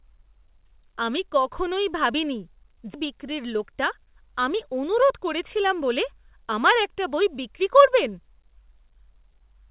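At 2.94 s, just after "আমি কখনই ভাবিনি", a skip ahead occurs. The receiver discarded a stretch of speech while later audio was already queued, likely because the jitter buffer overflowed, and playback jumped straight to the newer material. About 0.4 s of speech is missing, and nothing fills the hole. The two sides are spliced almost directly, so the sentence lurches forward with an abrupt seam rather than a pause.

Two bursts of jitter buffer speed-up follow. With more audio held than the buffer's target, the receiver trimmed the excess by cutting out short pitch-period-sized pieces again and again. From 3.52 to 4.05 s it plays at 108% speed, shedding a few tens of milliseconds. From 4.93 to 6.32 s, leading into "আমার একটা বই বিক্রি", it runs at 104%, losing somewhat more in total. The pitch stays put, but the delivery sounds rushed in the first burst. Throughout, the G.711 mu-law call path leaves nothing above 4 kHz.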